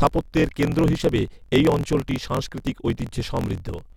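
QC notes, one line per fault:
Throughout: block size mismatch (truncated). Dropped block tails make speech run 1.12 times fast with its timbre kept, with a 43.1 Hz buzz showing as regular vertical spectrogram lines.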